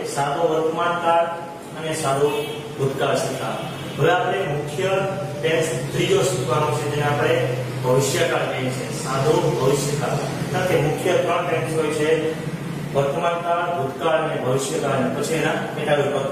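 At 2.09 to 2.15 s the audio jumps forward, losing about 50 ms. The cause is compressed frames skipped: a frame of the encoded stream was missing from the file or rejected by the decoder as damaged, so playback continued from the next frame. The gap matches a single frame of 46.4 ms.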